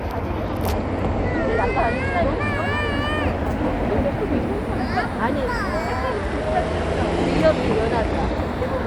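A recording of everyday sounds with two Bluetooth SBC bit pool drops, from 0.44 to 2.49 s and from 6.11 to 8.38 s. In each, the treble dulls and a gritty noise rises, then clears when the rate recovers. This fits the link falling from bit pool 31 to 15, near 105 kbps, so the top sub-bands get few bits and the rest are coarsely quantised. Unlike a switch to a hands-free profile, the sound keeps its wider bandwidth and recovers within seconds.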